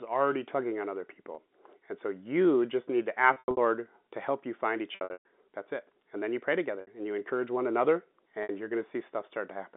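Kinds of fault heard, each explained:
Packet loss with pitch repetition: pieces of the speech stream went missing, and the receiver bridged each gap by looping the last pitch period while fading it out. Brief losses, such as 30 ms after "already tugging on other", sound like a buzzy held sound. Longer scattered losses near 3.3 s and after "to help you find", with runs up to 120 ms, decay toward silence. On a spectrogram the harmonics freeze into flat stripes. The waveform shows identical cycles shrinking in amplitude.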